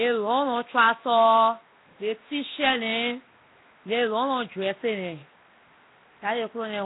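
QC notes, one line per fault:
throughout — Nellymoser compression. The speech carries a rough, hissy halo and a smeared, underwater quality from start to end. Nothing is heard above 3.8 kHz. The likely cause is the Flash-era Nellymoser Asao codec. It codes short blocks with a fixed two bits per sample. Bands too weak to earn bits are filled with noise, which gives the hiss and blur. The damage is heavy, which fits a 16 kbps stream.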